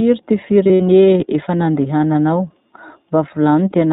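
From start to finish the speech sounds band-limited and slightly rough, with a thin, synthetic edge and nothing audible above 4 kHz. That is the iLBC codec, a narrowband VoIP coder that rebuilds the excitation of each short frame on its own. The damage is plainly audible here, and the grain fits iLBC's 15.2 kbps mode with 20 ms frames, which trades some naturalness for robustness.

Between 0.64 and 0.82 s the voice turns into a held, faintly buzzy and breathy tone, before normal speech returns on "efa nandehananao". These are lost iLBC frames. The decoder fills each missing packet by repeating the last pitch cycle blended with noise. The pattern points to about 100 ms of audio missing, scattered across 160 ms, with the longest gap under a tenth of a second. Because each frame decodes independently, recovery is immediate.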